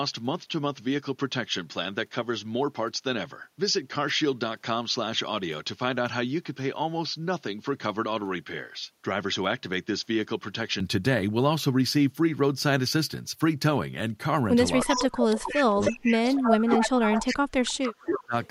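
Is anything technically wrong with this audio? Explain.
Yes. Echo leak appears at 14.82 to 15.63 s, 15.82 to 16.16 s, 16.33 to 17.35 s, 18.04 to 18.24 s and 18.44 to 18.48 s. A copy of the speech returns about 313 ms late, likely because a far-end echo canceller let loudspeaker pickup through. It sits only about 5 dB below the speech at first, then fades to faint traces near the end.

Speech suppressed in double talk runs from 14.85 to 18.35 s. The echo canceller, likely confused by overlapping talkers, pulls the near speaker down along with the echo. Across roughly three seconds the voice dips and breaks up, dropping by as much as about 30 dB.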